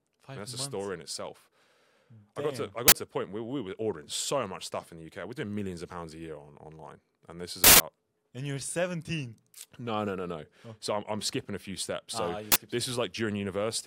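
A sudden, loud crack cuts in three times: at 2.88 to 2.92 s, at 7.64 to 7.80 s, and at 12.52 to 12.56 s. The first and last last 40 ms each, while the middle one runs 160 ms, long enough to become a burst of digital noise. Each is an uninitialised buffer: a block went to playback before any audio was written into it, so stale memory contents were output as samples.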